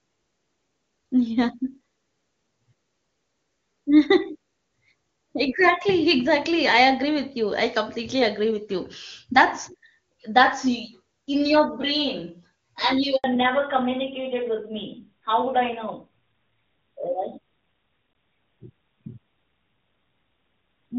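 Speech recorded over a phone call, with a network switch partway through. At 13.16 s a handover gap opens: the call was passed from one network to another, and no speech frames arrived for about 80 ms. The sound fades within a few tens of milliseconds to dead silence until 13.24 s, and whatever was said then is simply missing. On a waveform this shows as a short flat-line notch. On a spectrogram it is a clean vertical blank stripe across every frequency. From 13.24 s to the end of the clip comes a fallback to narrowband. Before the switch the HD Voice path is clear, with faint or no coding damage, which fits AMR-WB at its top rate of 23.85 kbit/s. After the switch the call is carried by an older narrowband codec, consistent with AMR-NB at 12.2 kbit/s. That codec keeps nothing above 4 kHz, so the speech loses its airy top and sibilant detail and sounds duller and rougher. A spectrogram shows energy reaching up to about 7 kHz before 13.2 s. 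After that point the energy stops abruptly at a flat ceiling at 4 kHz.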